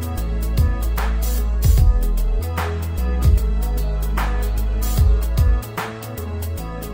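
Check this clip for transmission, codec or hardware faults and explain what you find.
This clip checks out with no faults found.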